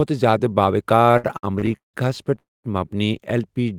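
From 1.03 to 1.96 s the speech drags in repeated stalls (stutter): ten short holds, the longest 172 ms, together about 382 ms, or 41% of that stretch. Packets kept arriving late, so the receiver stretched the last sound each time. Nothing is lost, only broken rhythm.

At 2.39 s a single call audio freeze of about 253 ms follows. The sound is held briefly, then drops to silence for 200 ms before resuming where it stopped. Unlike the stutter, it is one long gap, likely from packets held up in transit.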